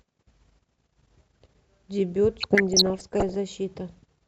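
From 2.40 to 3.35 s the speech carries burbling noise, which is DAB burbling. Weak reception let bit errors, around half a percent, slip past error correction into the MP2 stream, so corrupted samples put short blips of noise in single sub-bands and wrong scale factors make sub-bands jump in level for up to a frame.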